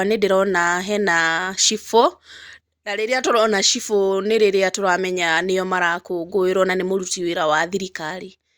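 Listening closely to the speech, nothing stood out as a technical fault at any point.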